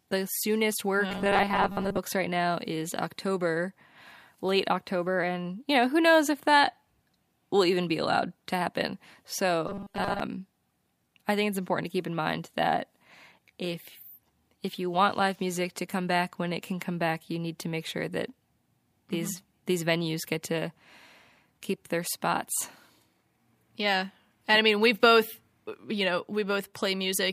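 From 1.10 to 1.98 s and from 9.68 to 10.20 s, speech turns into robotic sound from repeated short buffers, a rigid metallic buzz at 200 Hz, likely a 5 ms slice looping while most real audio is skipped. Spectrograms show flat, evenly spaced harmonics.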